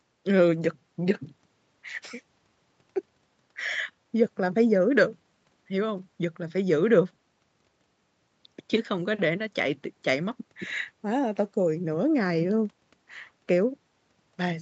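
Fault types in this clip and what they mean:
Nothing stood out on listening to this speech clip; the narrowed top end, with nothing above 8 kHz, is what the call path normally does.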